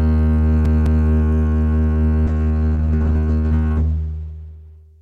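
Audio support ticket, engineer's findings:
CD stuck on one turn, 0.65 to 1.07 s: music stutters, same 0.21 s segment repeating twice with brief mutes at each jump. Disc scratch throwing the laser back one track per revolution, replaying identical audio until it clears.

Call bitrate drop, 2.27 s to end: music turns rough and muffled, top end gone. Bandwidth estimate fell and the encoder went from 64 kbps to 11 kbps, so coarser coding and a lowpassed band at that rate.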